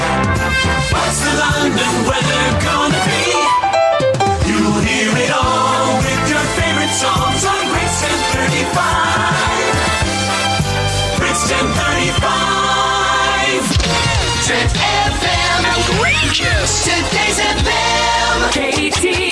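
Nothing here stands out as a technical problem; the audio just runs along without any fault you can hear.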